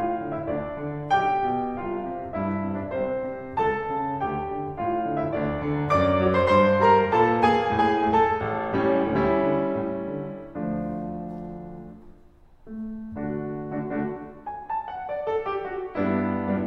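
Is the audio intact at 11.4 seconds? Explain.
Yes, the music at 11.4 seconds plays through intact, with no dropout, click, distortion or other fault at that moment.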